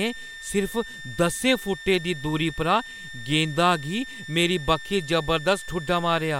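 Throughout the speech, a switching supply whistle sits near 1.8 kHz, drifting between 1.78 and 1.81 kHz as a power supply's audible switching leaks in, about 15 dB below the voice.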